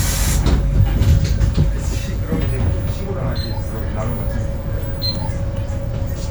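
Sounds, with no technical faults to be heard.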